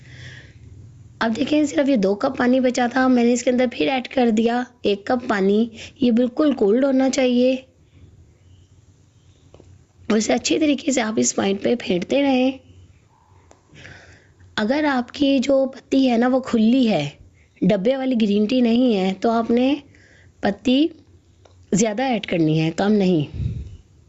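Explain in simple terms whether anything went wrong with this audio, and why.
Gain pumping runs through the whole clip. Loud and soft parts end up closer in level, squashing everything together. Unlike a noise gate, it never cuts out completely. The likely cause is gain set far too high, pulled back by a fast limiter.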